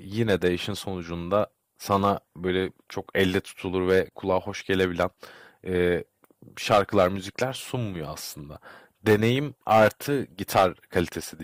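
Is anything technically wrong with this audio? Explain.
Yes. Hard clipping runs through the whole speech clip. The signal is driven about 11 dB past what a stage can pass, so peaks are sliced flat. Only a small fraction of samples, under one percent, hit the ceiling, giving crackly distortion on louder peaks.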